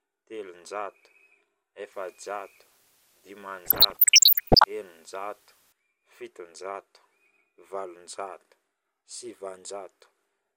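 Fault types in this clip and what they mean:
Low bit depth with dither, 1.92 to 5.72 s: the speech is reduced to very few amplitude steps, which fits an 8-bit word length, with random dither added before rounding so the quantisation error is spread into broadband noise instead of following the signal. The result is a steady, even hiss roughly 25 dB below the speech, present for this whole stretch, with no gritty or harmonic distortion riding on the speech itself.
DAB burbling, 3.65 to 4.66 s: inside the hissy stretch, corrupted bits slip past error correction into the MP2 data, so individual sub-band samples and scale factors come out wrong and isolated frequency bands lurch up or down in level frame by frame. This is heard as bubbling, muddy chirps and squelches layered over the speech for about a second, consistent with a bit error rate of only one or two percent.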